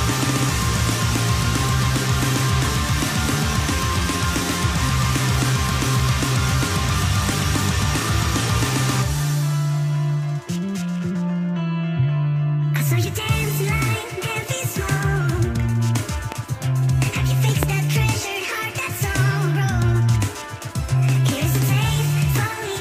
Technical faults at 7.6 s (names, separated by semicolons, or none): none